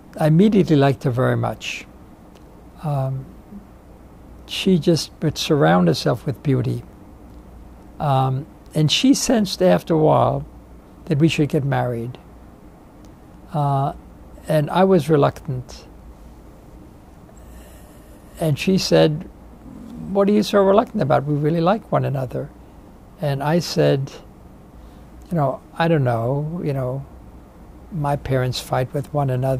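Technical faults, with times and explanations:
Nothing stood out as a technical problem on listening.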